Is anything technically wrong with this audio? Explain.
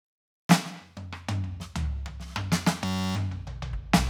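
Yes. From 2.85 to 3.16 s there is a system hang loop. The system froze while the hardware kept replaying one 10.67 ms slice of the music, which fits a 512-sample buffer. That gives a steady 93.8 Hz buzz, not a dropout's silence.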